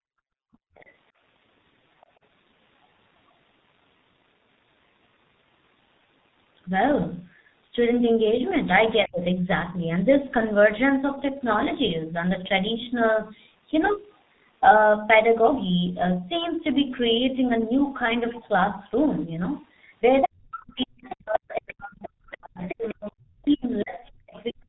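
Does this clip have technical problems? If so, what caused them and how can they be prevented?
Yes. The whole clip has heavy G.723.1 codec damage at 6.3 kbit/s. Its 30 ms frames blur consonants, and the spectrogram shows nothing above 4 kHz. A wideband codec prevents this.

From 0.0 to 0.75 s, the background is gated by the echo canceller, dropping about 40 dB. The waveform shows a near-flat floor. Gentler suppression settings avoid this.

The other side's voice leaks through at 0.53–0.93 s and 2.02–2.06 s, far below the speech, and at 20.22–20.27 s, roughly matching it. From 20.8 to 24.39 s it is somewhat quieter than the speech. It is likely residual loudspeaker echo. Better echo cancellation or a headset prevents it.

Speech is suppressed in double talk at 9.05–9.8 s, dipping roughly 30 dB. From 20.24 s to the end, it drops roughly 40 dB for about four seconds in total. This is likely caused by the echo canceller mistaking both voices for echo. 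Better double-talk detection prevents this.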